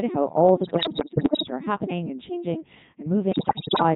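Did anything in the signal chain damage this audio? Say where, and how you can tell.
Yes. Codec 2 vocoder, throughout the clip, at the codec stage: speech is resynthesised from pitch and envelope parameters, so it sounds robotic and buzzy, which fits the 3.2 kbit/s mode.

Bit errors on digital voice radio, 0.64 to 1.50 s (after "how all the", before "are happening and changing") and 3.32 to 3.83 s, in the transmission path: corrupted vocoder frames cause pitch jumps, warbles and gibberish.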